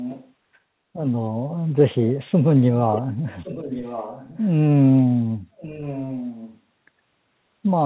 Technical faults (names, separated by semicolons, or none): echo leak